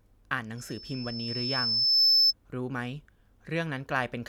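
Loudspeaker feedback squeal runs from 0.57 to 2.33 s: the microphone re-amplifies its own loudspeaker, and a 5.3 kHz tone swells over roughly a second and a half to sit far above the speech.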